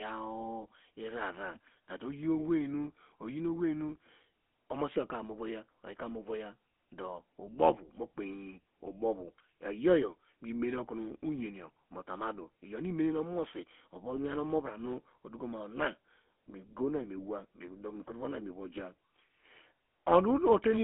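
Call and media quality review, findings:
GSM full-rate codec damage throughout, plainly audible. Buzzy, gravelly roughness on speech; line band 200 Hz to 3.4 kHz, nothing above 3.8 kHz. Vocal-tract model driven by sparse regular pulse excitation, fine detail discarded; fits 13 kbps GSM full rate.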